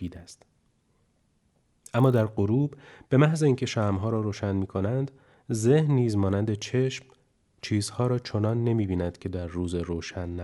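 From the start to 2.24 s, the speech carries a low, rough buzz at 50 Hz that rides only on the speech and drops away in the gaps. This is a resampler restarted on every block: each 20 ms block was converted on its own, which fits a change from 24 kHz to 48 kHz. At each block edge the filter lacked the true neighbouring samples, leaving a small error fifty times a second that fuses into this buzz.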